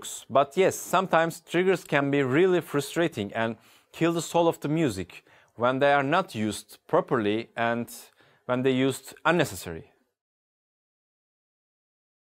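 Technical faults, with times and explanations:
No technical faults can be heard anywhere in this clip. There is nothing to list with a time or an explanation.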